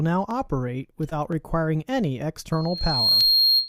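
A sharp, isolated click at 0.31 s, another at 1.32 s, and a third at 3.21 s are each a single thin tick with nothing audibly missing around it. These are likely dropped samples: well under a millisecond of the stream has gone missing, so the waveform leaps straight from one value to a later one. That sudden step is what produces each click and the narrow vertical line it leaves across the spectrum.

Between 1.09 and 1.13 s the audio briefly smears and wavers, as if the sound were held and then eased back into place. This is short concealed packet loss. About 20 ms of audio failed to reach the decoder in time. The receiver invented roughly 18 ms of stand-in sound by extending what it had just played, then blended it into the real signal when that resumed, which leaves the soft wobble at this spot.

From 2.52 s to the end, a high, piercing tone at 4.2 kHz swells up over about half a second and then sits on top of everything at about 5 dB above the wanted signal. 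This is loudspeaker feedback squeal. The microphone is picking up the loudspeaker it feeds, and at 4.2 kHz the loop gain exceeds unity, so that single frequency keeps reinforcing itself into a sustained whistle.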